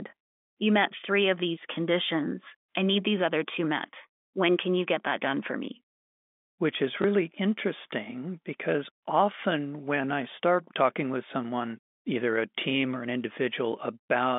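At 7.02 to 7.04 s, just before "interesting because often when", there is packet loss with the last packet repeated. A 20 ms stretch, which fits a single lost packet, was filled by replaying the previous chunk. The single repeat sounds like a small blip. A plain dropout would leave a silent hole. This one repeats sound, heard through the narrow telephone band of the G.711 line.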